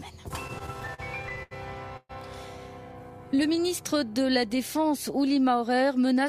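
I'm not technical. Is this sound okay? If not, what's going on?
No, there are three separate hiccups, all from the audio arriving unevenly over a network.

From 0.47 to 1.53 s you get repeated stalls (stutter): the sound catches about eleven times, the longest catch around 81 ms. Each time, the player stretched the last bit of sound while waiting for more data. Nothing is lost, but that second drags and stumbles.

At 1.97 to 2.11 s the sound briefly holds a smeared, fading tone that dips into silence for the last 20 ms, then carries on where it left off. That's likely a call audio freeze, where the data stopped arriving for a moment.

From 2.84 to 4.31 s there's a jitter buffer slow-down. The player quietly repeated tiny slices to build a safety margin, adding about 173 ms. The sound plays at roughly 89% speed at the same pitch, so it feels drawn out.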